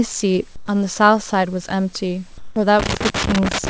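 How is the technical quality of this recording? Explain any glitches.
Two kinds of glitch stand out against a call-codec sound that stops at 8 kHz, with room noise about 38 dB below the speech.

Comfort noise in place of the background, 0.56–0.68 s and 2.38–2.56 s: the real background turns into smooth, featureless hiss, about 1 dB quieter in the first gap and level in the second. It is likely discontinuous transmission with synthetic fill. On a spectrogram, the textured background becomes a uniform wash.

Loose connector crackle, 2.80 s to the end: a failing contact chops the signal, giving irregular scratchy bursts that show as spiky waveform jumps and broadband vertical streaks.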